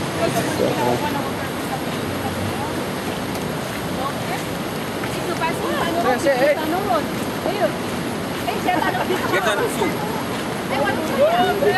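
No technical faults detected.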